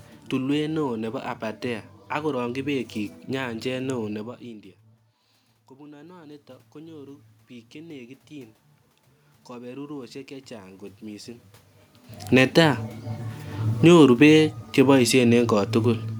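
Automatic gain rising is the main fault in this speech: after the talker moves away from the microphone around 4 s and the input drops by about 22 dB, the gain control raises its gain by about 8 dB from 5.68 to 8.64 s, and again by about 4 dB from 9.48 to 11.37 s, so voice and room noise swell together. Automatic gain falling follows after the talker moves again around 11.5 s: from 13.71 to 16.06 s the gain is cut by about 4 dB, and the voice and its background sink in step.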